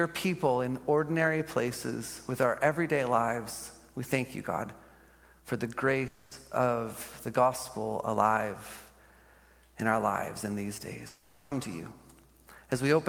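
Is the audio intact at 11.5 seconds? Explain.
No. A long network dropout, likely stalled packet delivery, spans 11.07 to 11.54 s. The last sound smears into a fading buzz or hiss, and those 440 ms never return.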